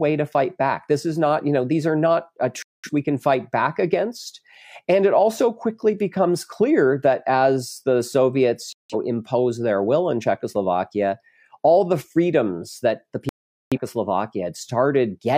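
At 2.62 s, after "these are not uh", the speech mutes until 2.90 s; again at 8.73–8.95 s, before "impose their will in"; and at 13.29–13.78 s, after "the freedoms that the". Each is a digital broadcast dropout: corrupted frames made the receiver mute, and that audio is gone.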